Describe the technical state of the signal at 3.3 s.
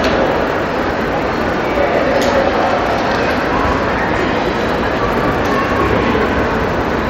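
At 3.3 s the signal is intact, with no audible fault at that moment.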